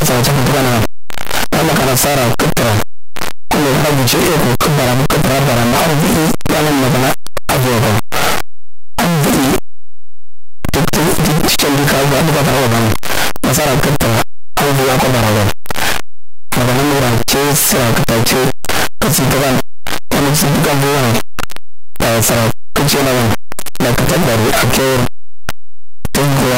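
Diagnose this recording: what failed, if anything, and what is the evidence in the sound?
Sample-format conversion failed throughout the speech: each zero crossing jumps the full range, making soft sounds as loud and harsh as strong ones, likely from signed and unsigned mixed up in the 8-bit samples. The waveform swings across its whole range; the spectrogram, broadband.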